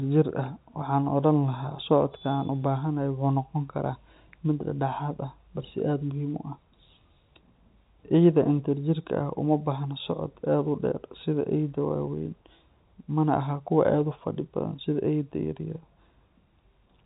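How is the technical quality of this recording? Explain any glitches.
The recording has no glitches: it is narrowband telephone-coded speech, consistent with G.711 mu-law at 64 kbps, with nothing above about 4 kHz and at most a faint coding grain riding under the signal.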